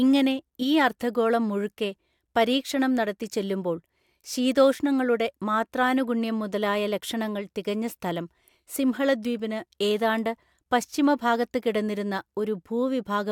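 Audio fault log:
Listening to the speech, nothing stood out at any point.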